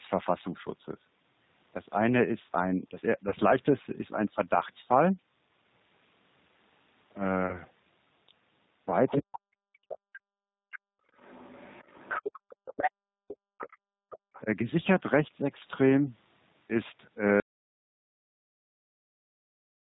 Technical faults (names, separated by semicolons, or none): G.729 codec; VoIP packet loss concealed by the speech codec; other side's voice leaking through; speech suppressed in double talk; background gated by the echo canceller; audio dropout to silence